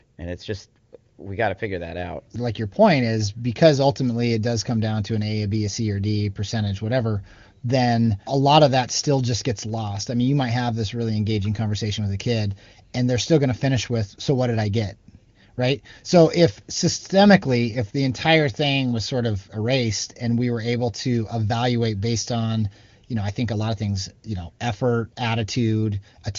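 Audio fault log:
No faults found in this speech clip; the AMR wideband (HD Voice) path at 23.85 kbit/s leaves at most faint coding traces.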